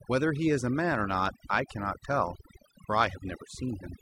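Across the whole speech clip, a noise reduction stage has been pushed far too hard, clamping down every frequency band it judges close to the noise floor and taking the softer parts of the voice with them. This overdone noise removal leaves near-silent gaps speckled with twinkling artefacts.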